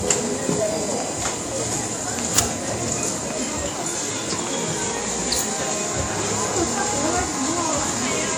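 A recording of everyday sounds, carrying a USB whine for its whole length: a steady tone fixed at 1 kHz, roughly 20 dB below the sound. It is set apart from mains hum by that pitch, locked to the bus's 1 ms frame rate rather than 50 or 60 Hz. Throughout, the audio also has nothing above 18 kHz and a smeared, low-rate codec texture that the file's high bitrate can't account for. This is likely low-bitrate audio saved at a high bitrate, consistent with a roughly 48 kbit/s WMA source re-encoded as 192 kbit/s MP3.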